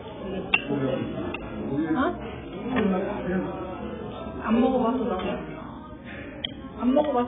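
Throughout, likely heavy AAC compression at a bitrate that fits about 8 kbps removes everything above 3.7 kHz, leaving the sound dull and smeared.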